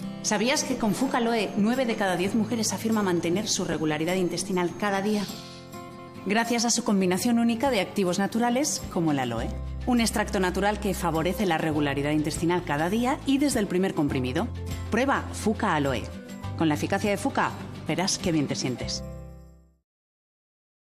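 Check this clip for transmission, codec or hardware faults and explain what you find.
Two faults were found, both of the same kind.

Frames out of order occur at 3.72 to 3.74 s and again at 5.89 to 6.09 s. In each, two neighbouring runs of frames reached the decoder swapped and were played in that order. The stretch comes back with its halves exchanged, each half about 8.7 ms long in the first event and about 92.9 ms in the second. This is heard as a brief garbled flutter, and no time is lost.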